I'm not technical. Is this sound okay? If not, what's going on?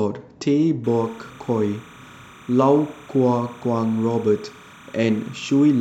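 No. From 0.84 s to the end of the speech there is timecode bleed: a synchronisation signal from a nearby cable or track leaking in. It flips between pitches around 1 and 2 kHz, giving a faint, steady chirping warble beneath the speech.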